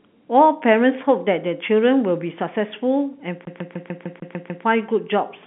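From 3.45 to 4.65 s the CD is stuck on one turn. A 0.15 s slice repeats eight times with a brief mute at each jump, shown as identical spectrogram blocks split by thin gaps.

At 5.43 to 5.47 s, GSM signalling bursts from a nearby phone are rectified into a 217 Hz buzz around 25 dB down. Evenly spaced vertical spikes appear across the telephone band, which stops near 3.8 kHz.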